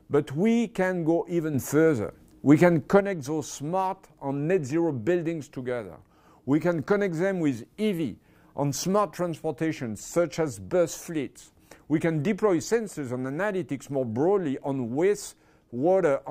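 At 1.54 s the audio and its noise floor jump up together by about 6 dB in a single step, then fall back at 3.00 s. That's a sudden gain jump, likely a digital gain change applied instantly with no ramp to smooth it.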